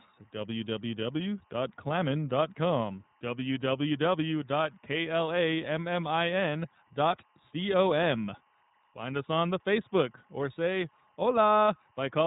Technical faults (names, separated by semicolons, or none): timecode bleed; iLBC codec